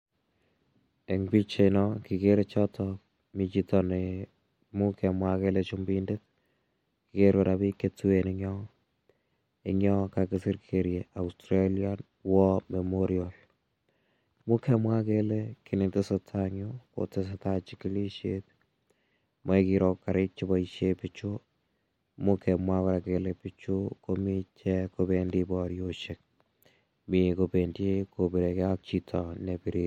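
No technical faults are audible.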